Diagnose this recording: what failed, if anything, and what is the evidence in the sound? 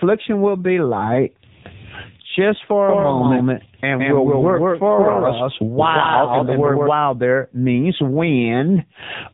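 The codec stage failed. The whole recording passed through the AMR narrowband mobile codec in a low, heavily damaging mode, consistent with about 6.7 kbps. Nothing above 3.8 kHz survives, so the voice sounds boxed-in and telephone-thin from start to finish. At so few bits, the encoder rebuilds each 20 ms frame from a crude vocal-tract model excited by only a handful of pulses. That leaves the speech buzzy and synthetic.

A doubled audio track runs from 2.89 s, just after "just for", to 6.87 s, just before "there means". A second full-band copy of the speech trails the original by roughly 150 ms at about the same level. It switches on and off abruptly, with no decay or room colour. The cause is likely a second, slower capture path or an edit that left two out-of-step copies mixed together.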